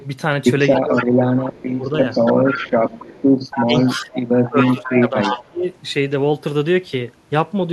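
A short speech recording with two connected faults. An echo leak puts a delayed copy of the talker back into the signal, trailing by 282 ms: at 0.74 to 1.03 s it sits only about 5 dB below the direct speech, a faint scrap at 1.57 to 1.64 s is about 30 dB down, and from 2.03 to 5.49 s a longer stretch runs about 10 dB down. This is likely a far-end speakerphone whose echo canceller failed to remove its own loudspeaker output. On a spectrogram the harmonic bands appear doubled, shifted right by about 0.28 s. Speech suppressed in double talk also occurs, likely because that canceller mistook overlapping speech for echo and turned everything down. The talker dips by as much as about 25 dB across 0.79 to 1.92 s, for about a second in total. Shorter dips come at 3.64 to 3.74 s (about 15 dB) and 4.05 to 4.11 s (about 5 dB), then a deeper one of about 20 dB from 4.49 to 5.66 s. These show as sudden hollows in the waveform envelope and as faded or gapped high-frequency energy on the spectrogram.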